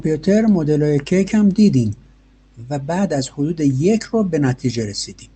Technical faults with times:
none

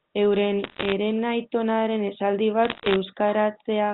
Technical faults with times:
0.64-0.92 bit errors on a digital phone line
2.65-2.96 bit errors on a digital phone line

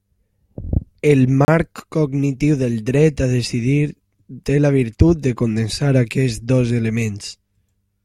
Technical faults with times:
1.45-1.48 gap between stream segments

